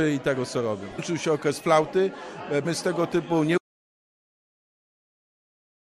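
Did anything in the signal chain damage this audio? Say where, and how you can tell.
Yes. Compressed frames were skipped at 0.98 s and again at 2.65 s. This is a codec or storage problem: a run of encoded frames, roughly ten each time, never reached the output. The audio jumps forward by around a fifth of a second at the first point and about three tenths of a second at the second.

An audio dropout to silence begins at 3.58 s and runs to the end of the clip. The sound stops mid-flow and is replaced by silence, with no room tone or noise floor underneath. That points to the input rather than the encoder: the likely cause is a lost capture device, a broken link or a mute, while the recorder kept writing silence. Whatever followed that point is gone.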